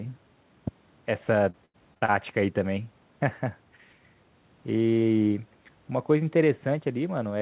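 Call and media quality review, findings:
Repeated packet loss (robotic sound), 1.5–2.1 s: five concealment gaps, longest 82 ms, with a third of the span patched by extending the preceding audio. The result is choppy speech with pieces missing. Likely component is network loss with jitter-buffer concealment. It differs from a single dropout because the holes recur in quick succession. Bandwidth stops at 4 kHz, consistent with a G.711 call path.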